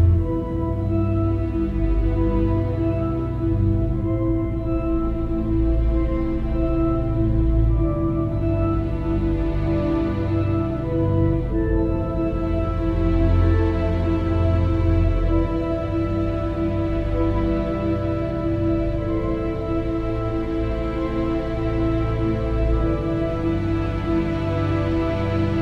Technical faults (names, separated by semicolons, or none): none